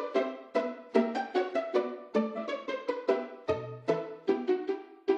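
A short sound clip with damaged data in a compressed stream from 2.33 to 2.38 s: the decoder misreads corrupt frames, producing a brief glitch, heard as a chirp, squawk, click or short hole.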